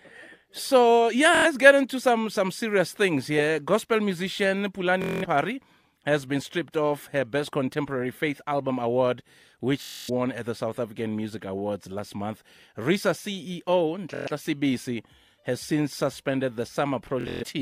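Bluetooth stutter hits the speech at 1.35 s (before "get into some some"), 5.02 s, 9.82 s (before "at the"), 14.14 s and 17.21 s, each 0.1 to 0.27 s long. Late packets made the receiver loop its last short slice, giving a buzzy machine-gun repeat that shows as evenly spaced identical vertical stripes on a spectrogram and a copied waveform cycle.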